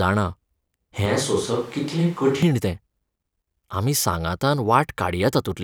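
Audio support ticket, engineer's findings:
1.06–2.43 s: switch to a distant microphone. Speech abruptly turns roomy and hollow, bass thinned, with no real level jump. Likely cause: close-mic feed dropped, distant mic carried the signal. Spectrogram: low end thins, reverb smears onsets, noise floor rises to roughly 25 dB below speech, hard edges at both switch points.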